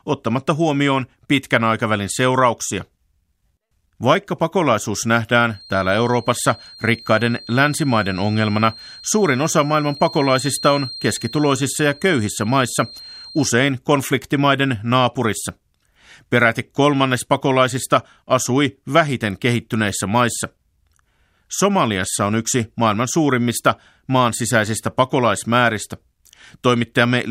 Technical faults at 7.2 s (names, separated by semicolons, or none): feedback whistle